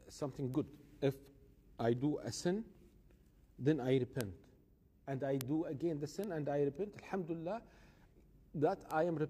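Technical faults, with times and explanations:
0.54, 4.21, 5.41, 6.24 and 8.91 s, bit error spikes: five isolated sharp ticks, peaking at about -28, -16, -10, -22 and -22 dBFS. Each is a sample value that jumped by a power of two and snapped straight back, lasting only a sample or two, with the 4.21 s tick slightly broader. That near-instant step carries energy across the whole spectrum and has no relation to the surrounding audio, so it sounds like a dry click rather than part of the signal.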